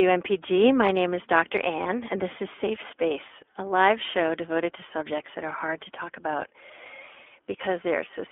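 From start to finish the speech passes through the iLBC codec, and the damage is plainly audible. The band is confined to roughly 300 Hz to 3.5 kHz, so low body and all upper detail are gone. Because each short frame's excitation is coded on its own, the voice takes on a rough, slightly synthetic grain. The texture points to iLBC's 20 ms mode at about 15.2 kbps.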